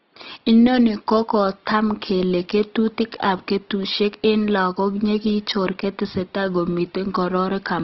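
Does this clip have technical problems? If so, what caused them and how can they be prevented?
Yes. All the way through, the speech has a rough, grainy texture and noisy tones. That's Opus compression, likely in its music mode at something like 16 kbps, filling starved bands with folded or noise content. Giving the encoder more bitrate would prevent it.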